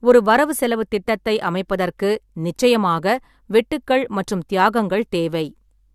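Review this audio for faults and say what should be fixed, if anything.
Nothing in this speech recording needs fixing. No faults can be heard at any point, so there is nothing to prevent.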